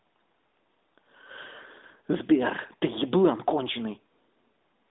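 No faults to report: the speech runs over an AMR narrowband mobile codec path, consistent with AMR-NB at 12.2 kbps, band-limited to the 200 Hz to 3.7 kHz telephone range and carrying only light coding texture.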